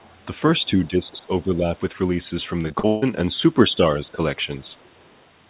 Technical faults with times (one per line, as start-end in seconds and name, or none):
0.00-0.15 other side's voice leaking through
0.60-1.67 speech suppressed in double talk
2.62-3.04 repeated packet loss (robotic sound)
3.76-4.20 speech suppressed in double talk